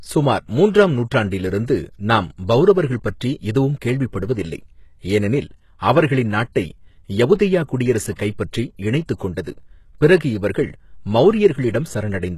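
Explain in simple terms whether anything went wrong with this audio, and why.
A couple of things went wrong here, and both come from how the speech was compressed.

The whole clip has the sound of HE-AAC compression, likely squeezed hard to save space. This kind of codec only properly stores the lower part of the sound and then fakes the treble by copying lower bands upward. Nothing survives above about 12.3 kHz, and the damage is easy to hear: the top end is rebuilt and doesn't quite match the rest, so s sounds come out gritty, metallic or lispy.

There are also two short bursts of pre-echo: one at 7.39 s, just before "குடியரசு கைப்பற்றி இணைத்துக்", and another from 8.15 to 8.19 s, just before "கைப்பற்றி இணைத்துக்". The codec spreads its noise across a whole chunk of audio, so when a sharp sound lands late in a chunk, a short hiss leaks into the quiet moment before it. That leak is about 10 ms the first time and 36 ms the second, and it makes those onsets sound softened and smeared.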